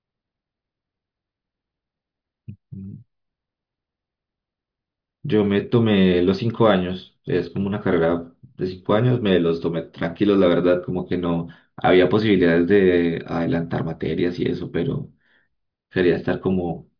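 No audible technical faults.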